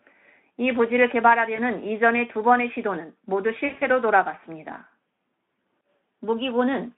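Speech over a narrowband Speex call shows VoIP packet loss concealed by the speech codec: a brief smear near 1.55 to 1.59 s, then a scattered stretch from 3.65 to 3.87 s, about 120 ms lost, longest run 60 ms. Unlike a dropout, gaps fill with stretched, fading tone, not silence.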